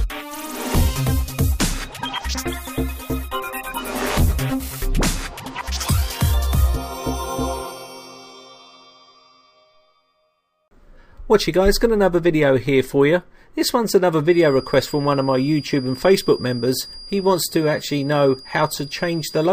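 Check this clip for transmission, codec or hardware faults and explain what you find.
There's one fault. From 14.21 s to the end at 19.53 s, a feedback whistle sits behind the sound: a thin, steady 4.8 kHz tone, around 20 dB down, swelling and fading slowly in level. It's likely a loudspeaker-to-microphone loop hovering right at the edge of feedback.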